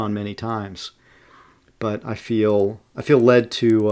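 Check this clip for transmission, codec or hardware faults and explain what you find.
The resampler restarted on every block from 2.5 s to the end: each 100 ms block was converted separately, likely from 44.1 kHz down to 16 kHz, so every edge lacked its true neighbouring samples. That error produces regular ticks at 10 Hz, heard only while speech is present.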